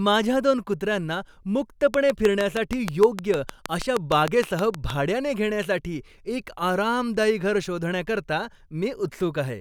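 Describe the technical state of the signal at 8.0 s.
At 8.0 s the speech signal is intact, with no fault audible at that moment.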